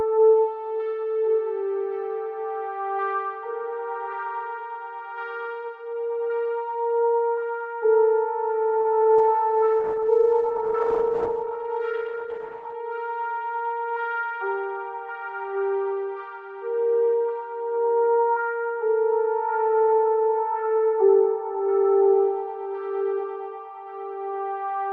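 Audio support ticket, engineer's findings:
Short stall from a late packet, 8.81–9.00 s: sound held about 32 ms too long with a faint buzz or dip. Jitter buffer ran dry, so the receiver stretched audio until the packet arrived.

Call bitrate drop, 9.19–12.81 s: audio turns rough and muffled as the Opus encoder falls from 32 to 13 kbps, with bandwidth narrowing from 12 kHz to 8 kHz.

Jitter buffer speed-up, 12.71–13.13 s: audio runs about 7% fast at unchanged pitch. The receiver trimmed around 40 ms of pitch periods to reduce excess buffered delay.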